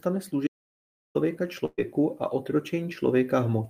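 Audio dropout to silence, from 0.47 s to 1.15 s: the speech stops abruptly and about 0.68 s of silence follows, with no room tone underneath, before the sound resumes mid-flow. Whatever was said in that stretch is simply gone. A gap this clean and total most likely comes from the input being lost for a moment, through a disconnected device, a broken link or a mute, while the recorder kept writing silence.

Burst of packet loss, from 1.65 s to 1.80 s: here the audio does not drop to silence. The receiver kept extending the last bit of speech for about 123 ms, turning it down as it went, so the sound smears into a held, fading buzz or hiss, with roughly 20 ms of near-silence. The speech then picks up further along, with about 120 ms of the original missing.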